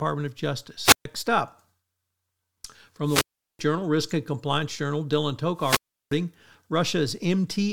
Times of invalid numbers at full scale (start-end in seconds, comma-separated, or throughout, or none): none